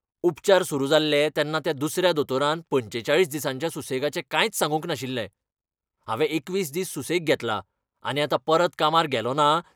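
No technical faults can be heard anywhere in the speech.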